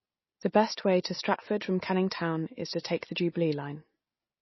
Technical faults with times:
0.00-4.42 MP3 compression

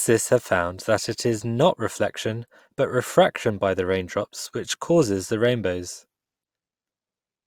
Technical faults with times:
none

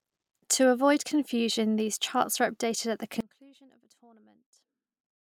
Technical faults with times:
3.21-5.26 audio dropout to a faint residue

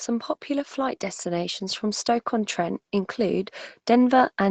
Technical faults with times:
0.05-4.50 automatic gain rising

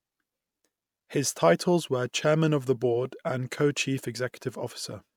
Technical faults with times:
none

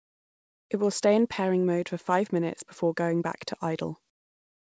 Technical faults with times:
0.00-0.70 comfort noise in place of the background
4.10-4.63 comfort noise in place of the background

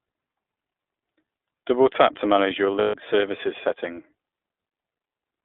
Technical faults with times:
0.00-5.44 iLBC codec
2.79-2.96 lost iLBC frames

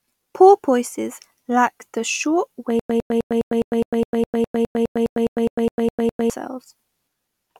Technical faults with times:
2.79-6.30 stutter with silent gaps

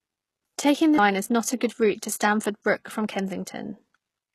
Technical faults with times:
0.00-4.35 HE-AAC compression

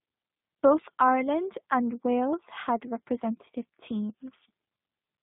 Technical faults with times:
0.00-5.23 G.729 codec

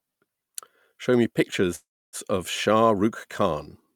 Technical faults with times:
1.75-2.16 call audio freeze

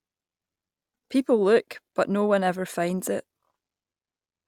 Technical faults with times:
none

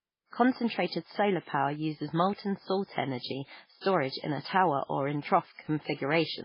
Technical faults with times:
0.00-6.45 MP3 compression

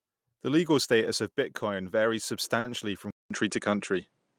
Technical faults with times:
2.59-2.67 short stall from a late packet
3.11-4.38 input switched to a poorer device

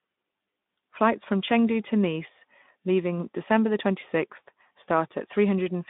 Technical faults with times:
none

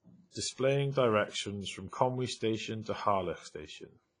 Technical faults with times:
0.00-4.20 WMA compression

